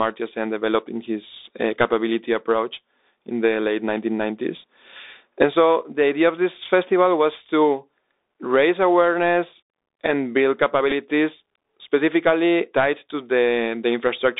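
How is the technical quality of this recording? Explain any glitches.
Technical quality is limited by the Bluetooth headset link: the whole recording is squeezed through the narrowband headset codec, and there is one brief packet glitch.

Bluetooth CVSD headset codec, throughout: CVSD codes the signal one bit per sample, each bit only nudging the level up or down by a step that adapts. The audio here sits in a band of about 300 Hz to 3.7 kHz, which fits a 64 kbps headset link, so it sounds boxed-in and telephone-like. The codec damage is plainly audible: s sounds turn scratchy, loud bright moments distort where the step can't keep up, and a grainy hiss runs underneath the speech.

Bluetooth headset packet repeated, at about 10.91 to 10.93 s, just after "raise awareness and build": a few packets between headset and phone were lost, and the decoder replayed the previous packet's data to fill the gap of about 11 ms, which fits roughly three lost packets. 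The repeat every 3.75 ms is heard as a brief buzz near 267 Hz until good packets return.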